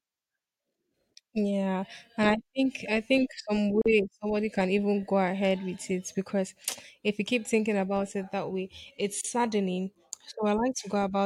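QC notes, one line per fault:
3.82–3.86 s and 9.21–9.24 s, gap at a join of encoded pieces: gaps of 42 ms after "think I think some" and 32 ms after "it that way it's". Leftover encoder start delay and end padding sit between the pieces. Unlike a dropout, nothing is lost: the speech resumes exactly where it paused, with smeared edges.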